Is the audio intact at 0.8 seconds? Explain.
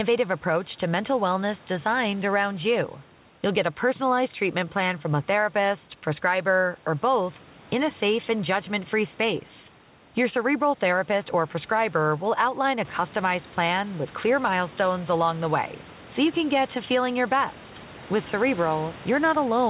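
Yes, the audio is intact at 0.8 seconds, with the speech carried cleanly through the call path and no fault at that moment.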